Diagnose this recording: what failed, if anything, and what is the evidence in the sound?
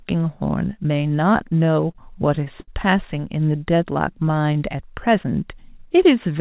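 Repeated stalls (stutter), 1.3 to 2.7 s: the speech catches and drags through thirteen brief hangs, the longest 72 ms, adding about 215 ms without losing anything. At the network and buffer stage, packets arrived late, the jitter buffer ran dry, and the receiver stretched the last sound each time.

Jitter buffer slow-down, 3.46 to 4.77 s: the speech runs at 90% speed with its pitch unchanged, adding 131 ms of drawn-out sound. Running low on reserve or after raising its target delay, the buffer repeated single pitch periods to rebuild its margin, all within a band that stops at 4 kHz, which fits G.711 mu-law.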